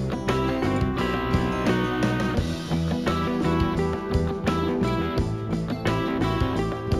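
Throughout the clip, imaging from linear upsampling: the rate appears to have been raised, likely from 16 kHz to 44.1 kHz, by straight-line interpolation. The top is dulled, and faint mirror images sit between 8 kHz and 16 kHz, roughly 35 dB down, adding a light metallic shimmer.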